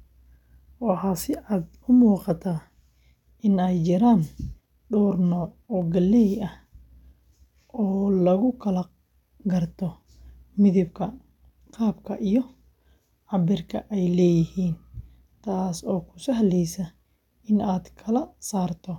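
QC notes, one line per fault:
5.82 s and 12.16 s: dropped samples. Each is one sharp click, the first between "dhowr nooc oo" and "galley ah", seen as a thin vertical spectral line. The likely cause is a fraction of a millisecond of missing samples, making the waveform jump abruptly.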